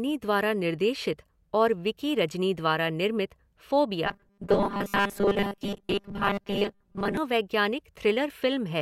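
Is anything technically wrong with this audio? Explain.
Yes. From 4.06 to 7.17 s the speech takes on a robotic sound from repeated short buffers. It turns into a stiff, metallic buzz at 200 Hz that still roughly tracks the words. The likely cause is new audio arriving too late. The playback then loops the last 5 ms segment to fill the gap, and most of the real audio in that stretch is skipped. Repeating a 5 ms block stamps its own 200 Hz pitch over the speech.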